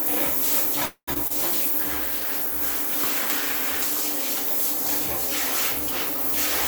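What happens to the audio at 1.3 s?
A short concealed packet loss occurs from 1.27 to 1.32 s. About 20 ms of audio never arrived in time, and the receiver bridged the gap with roughly 25 ms of extrapolated sound before blending back, which leaves a brief smear or wobble.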